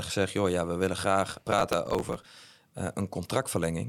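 A speech recording with processor overload crackle from 1.31 to 2.25 s. Dozens of missed buffer deadlines, each a few milliseconds long, are skipped outright, producing gritty tearing that stops once the load clears.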